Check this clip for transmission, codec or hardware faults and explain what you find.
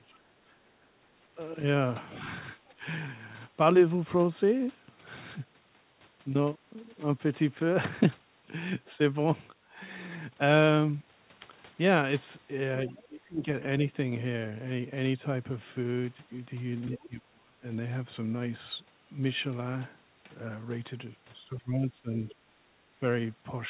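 The speech shows three echo-canceller faults in a telephone-band call, with nothing heard above 4 kHz, which fits G.711 mu-law.

Speech suppressed in double talk: the talker's level sinks across 0.0–2.86 s, 12.87–13.47 s, 16.99–17.64 s and 21.57–22.32 s, dipping by about 25, 20, 30 and 15 dB. The likely cause is an echo canceller that couldn't separate the local talker from loudspeaker echo while both sides spoke, so it turned everything down.

Other side's voice leaking through: a faint second voice, roughly 30 dB under the talker, surfaces from 2.12 to 2.73 s and as brief scraps near 12.97 s and, about 35 dB down, near 17.0 s. It is likely far-end audio from the loudspeaker that the canceller failed to remove from the microphone.

Background gated by the echo canceller: from 22.6 to 22.8 s the room sound drops by about 11 dB and then returns. The canceller clamped the microphone hard while the loudspeaker was active and released it a fifth of a second later.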